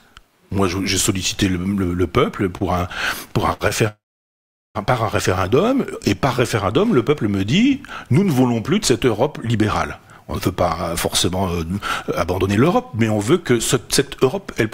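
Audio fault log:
2.57–2.62 s, 3.53–3.62 s and 3.68–3.72 s, short stall from a late packet: each time a packet shows up late, so the jitter buffer runs dry and the last bit of sound gets stretched by 30, 67 and 19 ms. It picks up where it left off, so you hear a brief held, slightly buzzy moment rather than anything dropped.
3.88–4.77 s, call audio freeze: the sound stops for 0.87 s. The last sound carries on briefly as a fading buzz, then there's about 0.76 s of silence before the audio resumes right where it stopped. The likely cause is packets held up in transit emptying the jitter buffer, which inserts a gap without losing anything.
11.29–14.65 s, jitter buffer speed-up: the buffer has built up more audio than it wants, so the receiver keeps snipping out tiny pitch-period slices, about a fifth of a second in total. Playback runs at 106% with the pitch unchanged, which makes this stretch sound a touch hurried.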